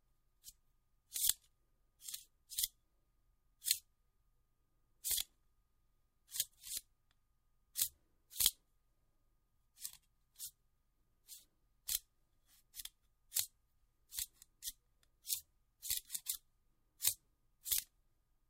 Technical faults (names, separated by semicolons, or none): dropped buffer (overrun)